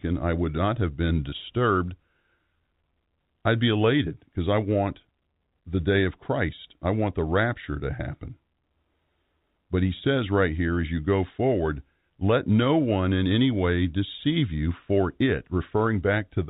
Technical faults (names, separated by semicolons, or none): packet loss with pitch repetition